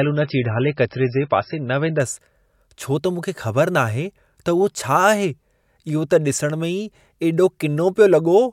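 From 0.0 to 2.0 s, an adaptive stream starting at a low bitrate (fitting roughly 19 kbit/s MP3) sounds dull and smeared. The spectrogram is blank above 5.6 kHz, then widens abruptly with no gap.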